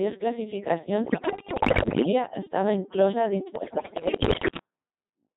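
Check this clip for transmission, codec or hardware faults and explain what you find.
Two faults are present: low-rate vocoder coding throughout, plus two bursts of radio bit errors.

Codec 2 vocoder runs the whole clip. The speech is rebuilt from pitch, voicing, energy and envelope only, sounding robotic and buzzy, which fits about 2.4 kbit/s.

Bit errors on digital voice radio hit from 1.06 to 2.12 s, ending before "estava inclosa dins", and from 3.56 to 4.58 s, just after it. Flipped bits corrupt whole frames. The voice jumps in pitch and level, breaking into warbles and gibberish. The first burst sounds worse, with roughly one bit in five wrong versus one in ten.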